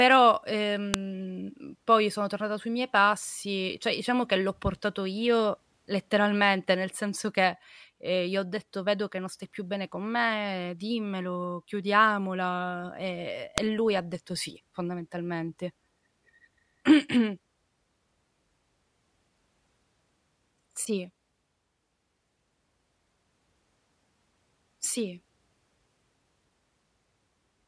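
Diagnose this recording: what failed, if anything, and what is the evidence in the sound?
The failure is in storage or file assembly: a file header played as audio. Sharp, loud clicks at 0.94 s and at 13.58 s, just before "e lui ha detto", mark where separate WAV pieces were joined without stripping their headers, so a few dozen header bytes are decoded as samples. Unlike a buffer dropout or a gain-step click, each snap is a single burst of loud junk that lands at a segment boundary regardless of what the speech is doing.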